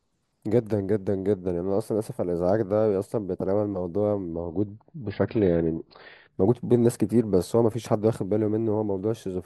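Speech clip where the adaptive stream drops to a lower bitrate from 4.32 to 6.32 s: treble vanishes above 5.2 kHz, artefacts rise, no gap, likely a slowed connection.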